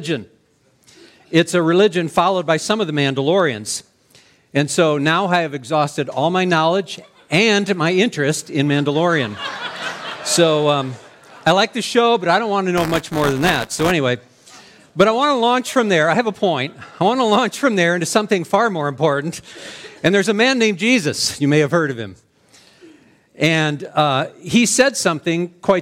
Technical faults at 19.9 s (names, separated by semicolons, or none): none